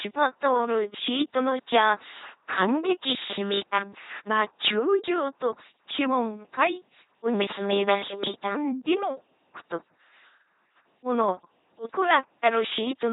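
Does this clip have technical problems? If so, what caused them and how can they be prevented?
Yes: throughout, LPC-10 vocoder buzz and hiss, voicing forced fully on or off, nothing above 3.9 kHz, unlike smeary codec warble, fitting 2.4 kbit/s. Use a modern higher-rate codec instead.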